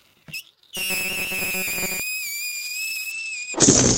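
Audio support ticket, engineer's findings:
Robotic sound from repeated short buffers, 0.77 to 2.00 s: rigid metallic buzz at 188 Hz. Likely cause is the playout side repeating a segment of about 5.3 ms while new audio arrives too seldom. Roughly half the material replaced by repeats.

Call bitrate drop, 2.52 s to end of clip: rough, muffled sound. Encoder target fell from 128 kbps to 11 kbps, coarser coding, and top bandwidth cut from 20 kHz to 8 kHz. Held at the lowest rate for 1.43 s, with no recovery before the clip ends.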